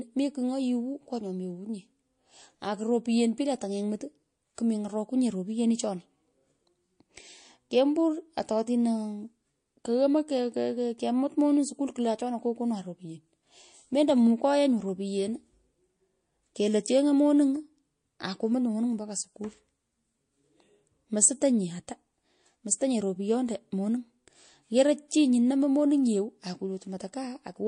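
Throughout, the speech sounds watery and swirly, likely from MP3 compression at a low bitrate around 40 kbps; the spectrogram shows flickering high-frequency patches. At 4.55 s and again at 25.08 s, pre-echo puts a short hiss, about 13 dB above the background, roughly 30 ms ahead of a sharp attack, which arrives softened. This fits long transform blocks with no switch to shorter ones. On a waveform it appears as low fuzz leading each onset, and on a spectrogram as a broadband smear before it.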